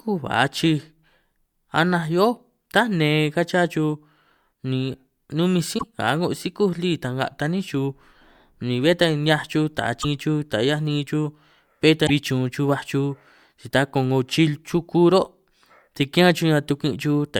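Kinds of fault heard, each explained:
Damaged data in a compressed stream: bytes in the encoded speech stream were corrupted, so the decoder misreads those frames, loses its place and hunts for the next valid frame header. Each loss comes through as a brief garbled blip breaking into the speech: about 90 ms at 5.75 s, between "ni numinj" and "nga a'ngo sikúj lí"; about 50 ms at 10.0 s, right after "chuj taj"; and about 60 ms at 12.04 s.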